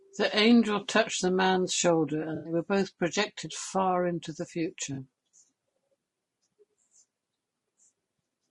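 Low-delay AAC compression runs through the whole speech clip, likely AAC-ELD at about 32 kbps, a rate that fits what is heard. Its short frames resolve pitch harmonics poorly, so the voice sounds plainly rough and grainy, with noise filling the gaps between harmonics. AAC frame loss with concealment strikes at 2.35 to 2.53 s, where about 100 ms of audio is missing, and again at 4.93 to 4.98 s, where about 40 ms is missing. In both places the decoder patches the hole from the last good spectrum, leaving brief smeared, noisy stretches in place of the missing sound.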